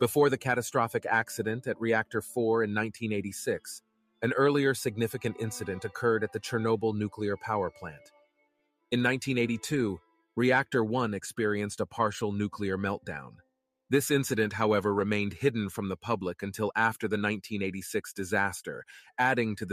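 A noise suppressor designed for speech was left running on this audio, so it treats steady and sustained content as noise. Throughout the clip the level swings by roughly 5 dB as the suppressor clamps down and lets go, giving a pumping, thinned character. In three places the suppressor cut the sound far harder than the surrounding material: from 3.8 to 4.22 s, from 7.73 to 8.91 s, and from 10.0 to 10.37 s. There the sound sinks by about 22 dB, 22 dB and 21 dB at its deepest, and the longest dropout lasts about a second.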